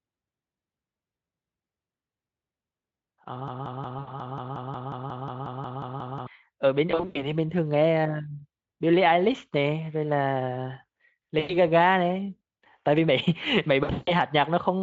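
A broken-record loop runs from 3.48 to 6.27 s. A fragment of about 180 ms plays back to back roughly fifteen times, so the same short sliver of speech stutters for nearly three seconds and whatever should have been heard in that span is gone. The likely cause is a stalled player or stream that kept resending the last piece it held.

VoIP packet loss concealed by the speech codec first appears inside that loop, from 3.99 to 4.16 s, where about 80 ms goes missing. The decoder fills the gap by stretching its last pitch and spectral shape while turning the level down, so the sound smears into a fading buzzy tone or coloured noise. It recurs at 6.91 to 7.28 s, with 180 ms lost in patches over 240 ms and the longest gap 100 ms, then at 11.39 to 11.56 s (100 ms). The last occurrence is at 13.83 to 14.12 s, with 220 ms lost over 240 ms and a longest run of 160 ms. Each time the speech stays weak or distorted for a moment after audio resumes. 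Between these faults, the Speex coding itself leaves little or no audible damage.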